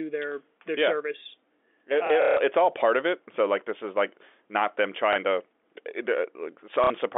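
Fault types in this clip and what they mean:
Packet loss with last packet repeated: Lost packets were concealed by replaying the most recent one until fresh audio arrived. The receiver used stored audio rather than silence. A repeat seldom restarts in step with the speech pitch. A scattered cluster from 2.07 to 2.37 s, with its longest run 150 ms, gives a rough buzzing stutter near 33 Hz, which fits 30 ms packets. Shorter repeats at 5.13 s and 6.84 to 6.90 s sound over the band-limited G.711 line.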